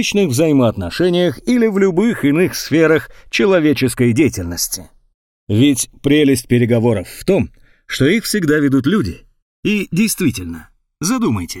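From the start of the clip to the end, the channels are drifting apart. The left and right signals appear to come from devices on independent clocks that disagree by something on the order of 100 ppm, so the time offset between them grows steadily, reaching roughly a millisecond by the end. Summed to mono, the moving offset drags comb-filter notches slowly across the spectrum, heard as a gradual, sweeping flange on the sound.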